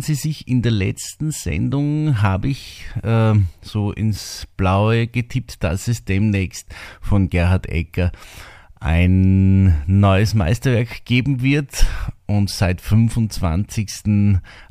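No technical faults are audible in this speech.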